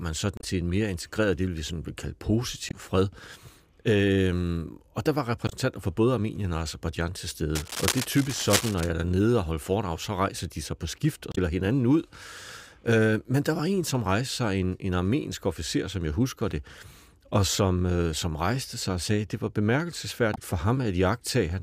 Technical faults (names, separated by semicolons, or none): damaged data in a compressed stream; cable scratch noise